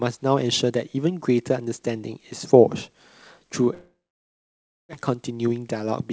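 From 3.74 s to 4.95 s the speech breaks off in what is likely a long network dropout. The last sound is stretched into a fading buzz that gives way to roughly a second of silence, about 0.96 s, before speech resumes with that stretch simply gone and timing shifted by about a fifth of a second. A brief packet-loss glitch would smear only a syllable. Here the concealment gives up and goes quiet, and the audio stays within the 8 kHz band of the G.722 call path.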